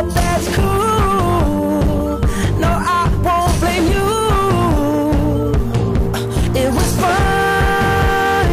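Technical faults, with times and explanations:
Throughout, hard clipping: about 6 dB of overdrive squares off roughly 15% of the samples, giving harsh fuzz on loud sounds rather than a soft compressor's rounded thickening.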